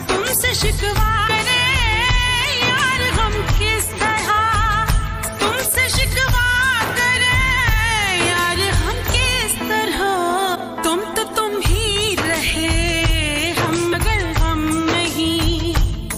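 At 1.27 to 1.30 s, 10.54 to 10.57 s and 13.91 to 13.94 s the audio jumps ahead and a 30 ms glitch fills the gap: likely a broken MP3 bit reservoir.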